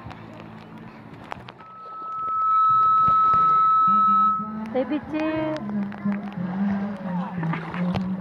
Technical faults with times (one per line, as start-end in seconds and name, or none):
1.58-4.73 loudspeaker feedback squeal